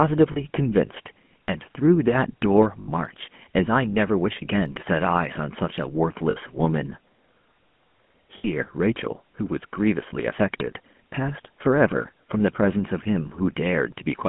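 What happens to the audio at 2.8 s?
Lost GSM frames hit the speech from 2.80 to 2.89 s, a gap of about 80 ms, which fits four consecutive 20 ms frames going missing. The decoder fills the hole by reusing the parameters of the last good frame. So instead of dropping out, the sound freezes into a short, rough metallic ring before normal decoding resumes. It sits on top of the buzzy, band-limited GSM full-rate character heard throughout the clip.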